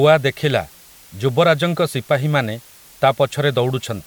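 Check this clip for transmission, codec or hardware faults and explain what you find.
There's one fault, and it runs the whole way through. It's low bit depth with dither: the speech sits on a steady, even hiss roughly 30 dB below it, which fits an 8-bit signal. Dither before rounding turns the quantisation error into smooth white noise instead of distortion.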